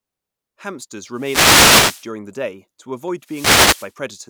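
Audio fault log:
1.13–2.10 s, wireless microphone noise hit: the FM radio link fades as reflections cancel, so receiver noise rises into a burst of static just before "the day to".
3.21–3.95 s, wireless microphone noise hit: the radio signal fades again, and the receiver noise swells into a static swish over the speech just after "the day to".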